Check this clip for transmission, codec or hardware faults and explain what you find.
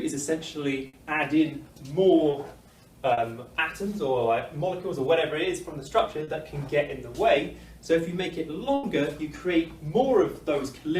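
There are two kinds of transmission fault here, both from lost packets.

The first is a burst of packet loss, at 0.87 to 0.95 s and 8.75 to 8.85 s. Around 60 ms and then 80 ms never arrived. The receiver stretched the last sound and faded it, giving a held buzz or dying hiss before the audio jumps ahead.

There are also three spots of short concealed packet loss, at 2.31 to 2.35 s, 3.13 to 3.19 s and 6.23 to 6.29 s. Only 20 to 40 ms dropped each time, and the decoder papered over it by extending the previous sound, so you get a brief smear or wobble.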